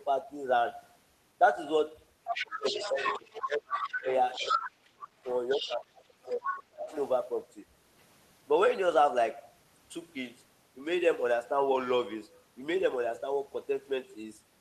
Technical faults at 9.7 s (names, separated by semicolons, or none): none